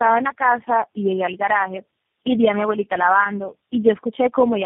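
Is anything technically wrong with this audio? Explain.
Yes, one problem. Tandem speech coding runs throughout: each low-rate codec re-encoded the previous one's damage, sounding like about four in a row. The speech comes out rough, warbly and muffled, with nothing above 3.6 kHz.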